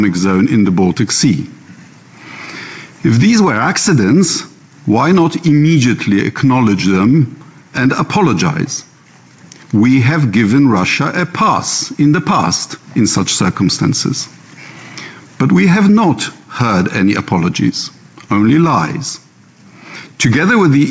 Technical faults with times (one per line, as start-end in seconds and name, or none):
none